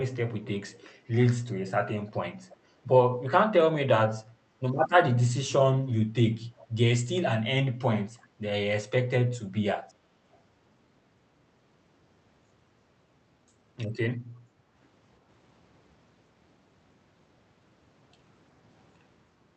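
Brief echo leak appears at 2.49 to 2.57 s, 6.58 to 6.65 s and 8.18 to 8.27 s: a faint copy of the speech trailing it by about 0.35 s, roughly 30 dB down at first and fainter still at 8.18 s. The likely cause is a far-end echo canceller letting loudspeaker pickup through. At 4.36 to 4.6 s the background is gated by the echo canceller: the room sound dips by about 7 dB for roughly a fifth of a second, then recovers. Throughout, the call codec limits the audio to about 8 kHz.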